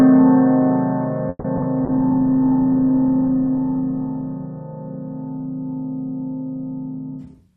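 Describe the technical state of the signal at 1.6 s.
Two bursts of short concealed packet loss, 1.56–1.59 s and 1.61–1.64 s: each gap got patched by extending the preceding sound, leaving a quick smear or wobble.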